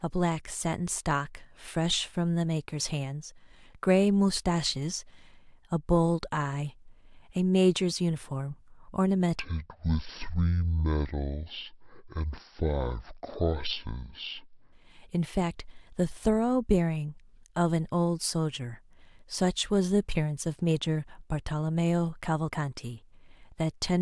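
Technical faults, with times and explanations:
9.39–14.73 s, wrong sample rate: speech drops a full octave and slows to half speed, which fits 48 kHz audio played at 24 kHz without conversion.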